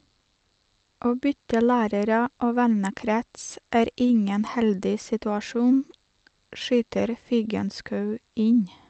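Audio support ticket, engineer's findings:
No faults found on listening to this speech clip.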